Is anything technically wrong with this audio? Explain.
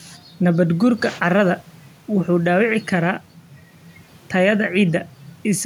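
No, nothing technically wrong turns up anywhere in this speech recording, so there's nothing here to flag.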